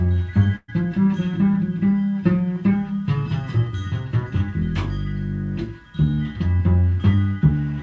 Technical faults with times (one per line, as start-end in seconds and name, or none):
0.56-0.73 burst of packet loss